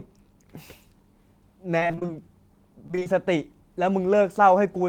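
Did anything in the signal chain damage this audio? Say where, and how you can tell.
Yes, repeated packet loss (robotic sound) damaged this speech at the network stage, from 1.79 to 2.11 s and again from 2.87 to 3.07 s. In each stretch the audio turns choppy, with eight short holes in the first burst and five in the second, the longest about 23 ms and 30 ms. The receiver patched each hole by extending the last sound, so roughly half of each stretch is concealment rather than real signal.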